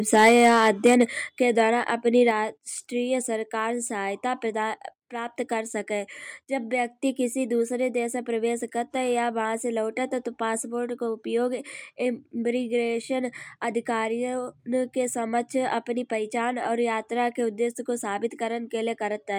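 From 0.13 to 1.03 s, the microphone's input volume was likely set too high, driving peaks about 8 dB past the converter's limit. This microphone overload flattens the tops of a few percent of samples, giving the loudest syllables a harsh, crackling edge.

At 0.29, 1.29 and 2.31 s, the call software likely responded to the overload by stepping the microphone volume down, by about 2, 5 and 4 dB respectively. Each step is a sudden drop in level, with speech and background falling together.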